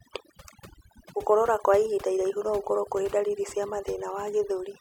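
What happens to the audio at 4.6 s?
At 4.6 s the speech carries overdone noise removal, present across the whole clip. Frequency bands near the estimated noise floor are pushed down or cut, so the background drops and breaks up into twinkling specks, unlike a noise gate, which mutes everything at once.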